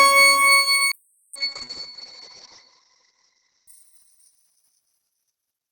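A call bitrate drop runs from 0.95 s to 4.97 s. The encoder was starved of bits after the call's bandwidth estimate fell, so it coded the audio far more coarsely and trimmed the top end. The coded bandwidth narrows from 20 kHz to about 8 kHz, leaving the sound muffled and rough. The worst stretch lasts about 1.2 s, with grain and smearing that point to a rate near 6 kbps, down from roughly 64 kbps, before clarity returns.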